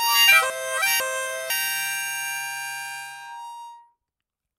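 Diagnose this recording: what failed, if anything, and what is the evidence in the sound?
Chunks out of order at the driver or buffer stage: between 0.5 and 1.5 s a 500 ms block plays one chunk late, causing jumbled sound with three hard joins.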